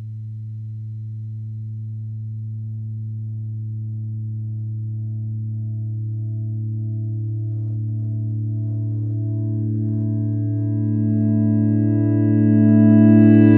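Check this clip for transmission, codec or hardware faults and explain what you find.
Nothing in this recording of sounds points to a transmission, codec or hardware problem, so there's nothing here to flag.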